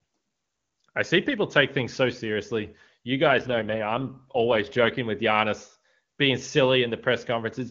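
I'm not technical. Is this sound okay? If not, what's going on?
No. From about 3.28 to 4.98 seconds the speech turns rougher and more artificial, then clears up again. This is an AMR rate drop: the phone network, most likely reacting to a weak radio signal, told the HD Voice (AMR wideband) codec to describe the voice with fewer details and spend the saved capacity on protecting against errors. The sound keeps its full range and never cuts out; it just loses smoothness during that stretch.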